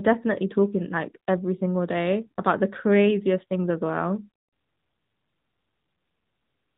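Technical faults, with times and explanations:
Throughout, AMR narrowband mobile codec: nothing above 4 kHz survives, and pulse-excited vocal-tract modelling makes the speech plainly buzzy and synthetic, consistent with a 10.2 kbps mode.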